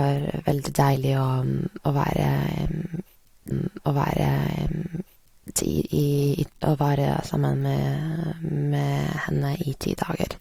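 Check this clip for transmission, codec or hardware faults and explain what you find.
One transmission fault is present: a stream segment repeated, from 3.50 s to 5.50 s. The player received or queued the same chunk of the stream twice and played it back to back, so about 2.0 s of speech is heard again, lengthening the clip by that amount. At the jump back to the start of the duplicate there is a small blip where the two copies join, and the speech then resumes from where it had already been.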